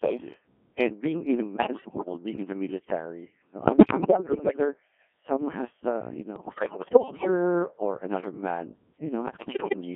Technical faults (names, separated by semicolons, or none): Codec 2 vocoder; bit errors on digital voice radio